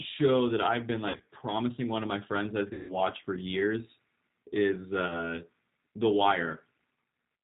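From the start, the speech carries G.729 codec damage throughout. At 8 kbit/s the decoder rebuilds each 10 ms frame from a vocal tract filter, a pitch predictor and a few pulses. Nothing above 4 kHz survives. The voice sounds plainly rough and synthetic.

VoIP packet loss concealed by the speech codec follows. From 1.08 to 1.28 s, gaps totalling 140 ms are scattered, with runs up to 60 ms. From 2.73 to 3.02 s, about 160 ms is lost. At 5.08 s, one short 20 ms gap occurs. The decoder extends its last pitch and filter, so the sound fades as it stretches. Weakness lingers after recovery.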